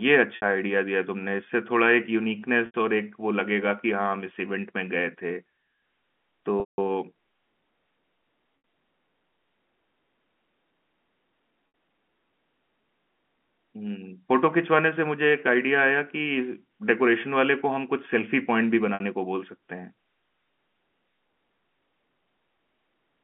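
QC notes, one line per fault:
0.36, 2.66, 6.60, 8.58, 11.68 and 18.94 s: packet loss with pitch repetition. Gaps of 60 ms each, except 80 ms at 2.66 s and 180 ms at 6.60 s. Each one sounds like a brief held, buzzy tone, because the receiver loops the last pitch period to fill the missing audio and fades it out. The 180 ms gap outlasts that fade, so it drops into silence before the sound cross-fades back in. The gap lengths fit 20 ms packets carrying the telephone-band G.711 audio.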